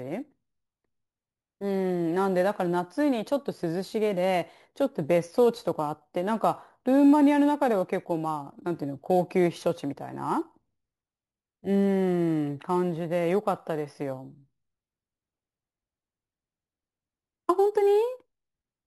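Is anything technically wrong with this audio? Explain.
Yes. Throughout the speech there is imaging from sample-and-hold upsampling. Repeated samples, which fits a 16 kHz source raised to 44.1 kHz, mirror the spectrum into 8 to 16 kHz, about 25 dB down. The result is a metallic fizz that follows the speech level and, unlike hiss, moves opposite to pitch.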